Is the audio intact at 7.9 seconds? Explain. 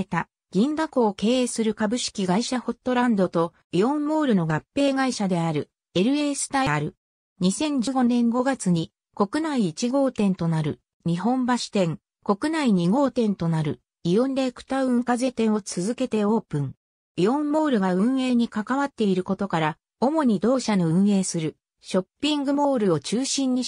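No. At 7.87 s the sound jumps forward abruptly, losing roughly a tenth of a second. This is compressed frames skipped: about one whole frame of encoded audio, 92.9 ms long, never reached the output, either because it was missing or because the decoder rejected it as corrupt.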